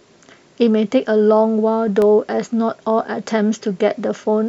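A speech recording carrying CD scratch ticks: four short clicks between 1.58 and 2.02 s, roughly seven a second, the longest about a millisecond. A surface scratch has wiped out more data per disc revolution than error correction can restore, so the player interpolates or mutes those samples.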